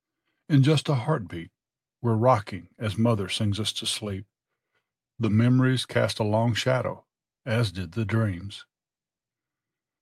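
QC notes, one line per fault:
No faults found. The sound gives nothing that needs a timed entry.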